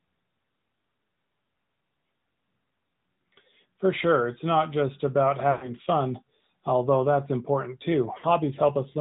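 Speech squeezed through the AMR narrowband mobile codec, so nothing above 4 kHz survives and the voice has that buzzy, synthetic phone edge, which fits a mid-rate mode around 10.2 kbps. Lost AMR speech frames show up twice. At 5.52 to 5.71 s, right after "it's not just about" and before "fun although that's important", the decoder stretches the last good sound and lets it fade, which points to about five dropped frames, roughly 100 ms gone. A shorter smear comes at 8.18 to 8.27 s, just after "fun although that's important", which fits about three frames, around 60 ms.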